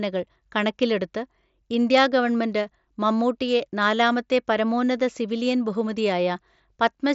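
The speech comes over what sounds like a wideband Bluetooth mSBC headset link, with the band reaching up to about 8 kHz and only a light grain on louder moments, and no technical faults are audible anywhere in it.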